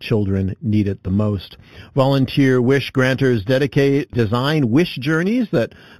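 Speech, with imaging from linear upsampling throughout. Top is dull. Faint mirrored copies sit between 4 and 8 kHz, about 25 dB down, adding metallic shimmer. This points to an 8 kHz source interpolated to 44.1 kHz.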